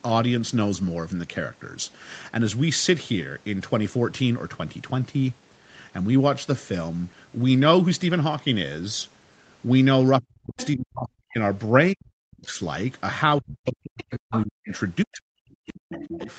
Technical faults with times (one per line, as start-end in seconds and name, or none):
10.19-11.38 speech suppressed in double talk
10.57-10.68 other side's voice leaking through
11.93-12.60 speech suppressed in double talk
13.39-14.72 speech suppressed in double talk
14.00-14.77 other side's voice leaking through
15.03-16.30 speech suppressed in double talk
15.94-16.33 other side's voice leaking through